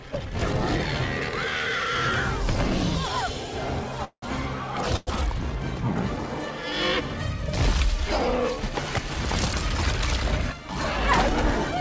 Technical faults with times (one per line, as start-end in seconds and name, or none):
4.04-4.24 call audio freeze
4.96-5.09 call audio freeze